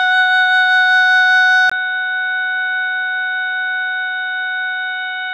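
At 1.7 s the music breaks for a brief gap of about 20 ms, then returns duller and boxier, with nothing above 3.8 kHz, noticeably quieter by roughly 10 dB, and carrying a new background noise sitting around 30 dB below the music. This persists to the end. The likely cause is an input switched to a poorer device: the recording jumped to a narrower-band microphone or headset profile, bringing its own tone, lower level and noise floor.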